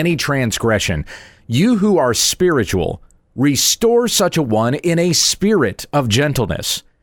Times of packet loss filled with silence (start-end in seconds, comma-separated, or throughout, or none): none